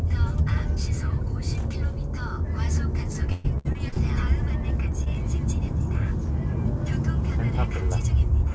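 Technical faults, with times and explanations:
3.32 to 3.98 s, repeated packet loss (robotic sound): five separate gaps in the stream, the longest 122 ms, went missing across this stretch. Each was patched by extending the preceding sound, so about 39% of the span is synthetic fill, leaving choppy sound with chunks absent.
5.04 to 5.08 s, short concealed packet loss: about 20 ms of audio arrived too late for the decoder. The receiver continued the previous sound to cover it and then blended back into the real audio, giving a brief smear or wobble.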